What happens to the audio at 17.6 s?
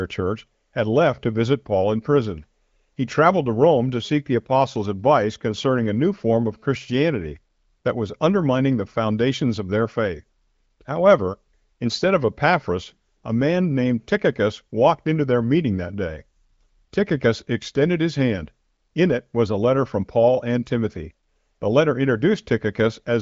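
Nothing goes wrong at 17.6 s: the speech carries on intact there, with only the band-limited, HD Voice-style sound of the AMR wideband link, whose content stops at about 7.5 kHz.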